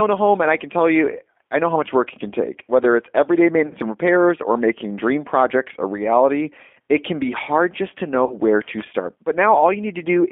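Throughout, the speech carries plain G.729 codec damage: a rough, slightly synthetic timbre, with the spectrogram showing energy confined to roughly 250 Hz to 3.5 kHz and nothing above.

At 3.67 to 3.75 s, between "it's everyday" and "and repairs or making", and again at 8.26 to 8.37 s, after "hard just to know", VoIP packet loss concealed by the speech codec replaces about 40 ms of audio, which fits two lost 20 ms packets. The decoder stretches its last pitch and filter into a fading buzzy tone or coloured noise, seen as smeared energy and a shrinking envelope.

From 8.61 to 8.83 s, loose connector crackle adds irregular scratching as a contact makes and breaks, appearing as jagged spikes in the waveform and broadband vertical streaks on the spectrogram.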